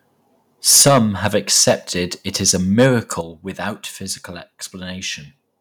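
Microphone overload first appears from 0.68 to 0.99 s, where peaks run about 8 dB past full scale and roughly a tenth of the samples are flattened. The likely cause is an input volume set too high for the converter. It recurs at 1.25 to 1.27 s, 1.57 to 1.71 s, 2.48 to 2.50 s, and 2.79 to 2.86 s just before "without physical", where clipping is heaviest. Each burst adds a rasping, crackly edge to the loudest syllables. On a waveform the peaks sit as flat plateaus at the rails, and a spectrogram shows broadband smearing above the harmonics.

Microphone volume stepped down at 0.88 s, inside that first overload, lowering the level by about 4 dB. It happens again at 3.21 s by about 8 dB, just before "without physical". This is likely the call software's automatic gain control reacting to the clipping and cutting the device input in a single step. The voice and the background fall together, abruptly rather than gradually. 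On a waveform the envelope drops like a stair, and on a spectrogram every band darkens at once at that instant.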